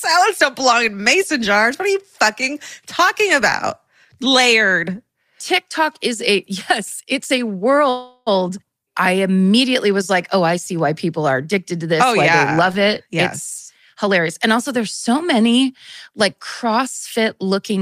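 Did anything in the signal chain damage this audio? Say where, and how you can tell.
Yes. At the network and jitter buffer stage, likely delayed packets emptied the buffer from 7.89 to 8.29 s. The receiver filled that 0.37 s with a fading continuation, so this call audio freeze inserts a gap without losing speech.

The jitter buffer speed-up drained the backlog by cutting pitch-period slices: 12.61 to 13.15 s plays at 117% (about 100 ms removed), and 13.94 to 14.69 s plays at 109% (about 70 ms), so speech sounds hurried at unchanged pitch.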